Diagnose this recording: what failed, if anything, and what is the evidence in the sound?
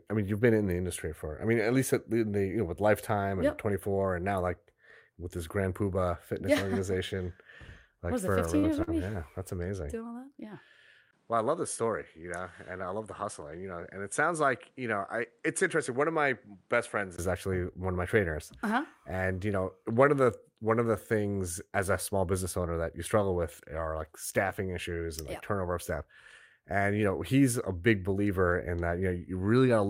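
Network stage: short concealed packet loss at 8.59 to 8.66 s and 8.83 to 8.90 s. About 40 ms went missing each time. The decoder extended prior sound, leaving brief smears.

Input stage: from 11.1 to 17.2 s the sound turns duller, with nothing above 11.1 kHz. It drops about 5 dB and gains new noise roughly 35 dB down. A 20 ms gap marks the change, likely an input switched to a poorer device.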